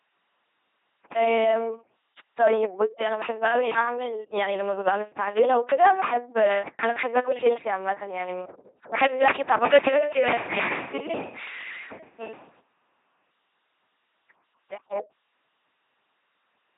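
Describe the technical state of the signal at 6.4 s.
At 6.4 s the speech is still passing through the LPC-10 vocoder that spans the whole clip: a ten-pole filter excited only by buzz or noise, fitting a 2.4 kbit/s rate. It gives a mechanical, robotic voice with nothing above 3.8 kHz.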